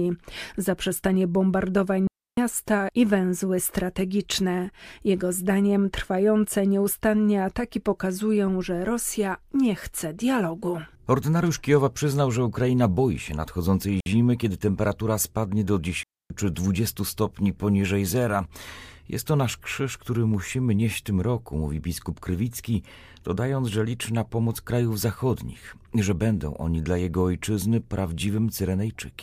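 A digital wireless dropout occurs three times as the receiver loses too much data and mutes: at 2.07 s after "zaprzestanie bombardowań" for 0.30 s, at 14.00 s after "boi się nadchodzącej" for 60 ms, and at 16.03 s after "kiedy temperatura spadnie do" for 0.27 s. Each is a clean hole of near silence with no noise burst.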